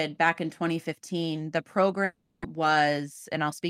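A long network dropout spans 2.04 to 2.44 s. The sound turns into a fading buzzy continuation and then a moment of silence, likely because about 300 ms of audio never arrived.

Jitter buffer speed-up follows from 2.98 to 3.62 s. Repeated pitch-period cuts remove roughly 40 ms, so the speech runs 5% faster and sounds hurried at an unchanged pitch.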